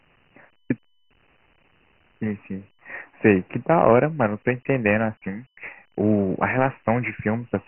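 Throughout the speech, the audio was stored as Dialogic VOX ADPCM, coding each sample as a 4-bit step from a prediction. Nothing sounds above 3 kHz, which fits a 6,000-sample-per-second rate near 24 kbps, and heavy quantisation leaves gritty hiss trailing the speech.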